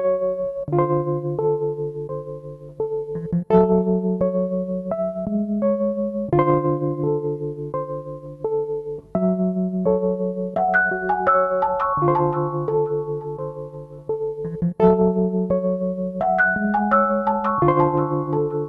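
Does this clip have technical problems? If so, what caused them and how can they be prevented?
No, no technical faults heard.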